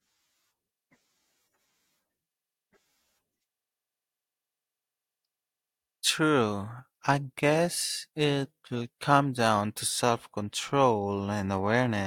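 No technical faults are audible anywhere in it.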